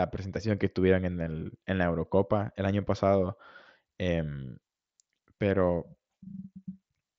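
From 5.67 s to the end of the speech, sample clock jitter sets in: the converter's timing wanders by around a microsecond or two, so each sample lands slightly off time. The resulting error, roughly 45 dB below the signal, is heard as a faint hiss that rides on louder, brighter speech and drops away in pauses. The mSBC headset codec's band limit near 7.7 kHz caps the top end throughout.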